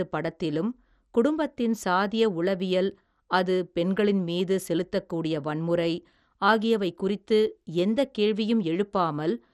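Speech run through what is likely MP2 compression, starved of bits at a rate that fits about 64 kbps, so upper sub-bands drop out and nothing survives above 14.4 kHz, while the remaining bands are coarsely quantised, leaving the voice dull with a plainly audible gurgling, granular distortion throughout.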